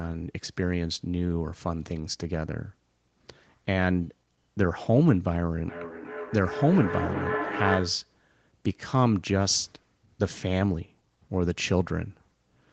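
From 5.69 to 8.13 s, feedback echo between two devices returns the speech roughly every 0.4 s, up to about -5 dB, with fixed spacing and increasingly thin, ringing repeats.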